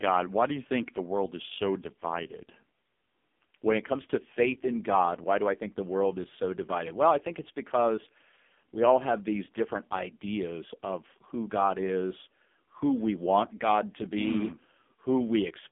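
Across the whole speech clip the AMR narrowband mobile codec is at work, and heavily: nothing survives above about 3.6 kHz, and the low end thins out below roughly 200 Hz, giving the classic phone-line band. What separates it from a simple band-limiting filter is the buzzy, synthetic quality of the voicing, which points to a very low AMR-NB mode around 5.15 kbps, where too few pulses per subframe drive the vocal-tract model.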